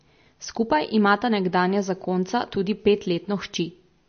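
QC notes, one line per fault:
Throughout, MP3 compression: plainly audible watery or swirly texture with smeared onsets and nothing above 6.4 kHz. This is likely MP3 encoding at a low bitrate, consistent with about 32 kbps, which drops weak frequency lines that flicker between frames and cuts the treble.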